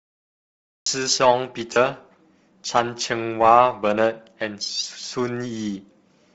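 Speech clip. It opens with a cut-off start: digital silence runs from 0.0 to 0.86 s, then the audio begins abruptly in the middle of a sound, with no natural attack or fade, as if recording or streaming only got under way late. From 1.73 to 1.76 s there are lost LE Audio frames. About 30 ms of signal drops out, and the decoder fills the gap by repeating the previous spectrum with scrambled phase, so the sound turns briefly into a noisy smear instead of going silent. Throughout, the speech carries a breathy, grainy edge in the upper spectrum, where detail has been replaced by noise fill. This is likely Bluetooth LC3 compression, and the plainly audible damage fits a low bitrate around 32 kbps with short 7.5 ms frames.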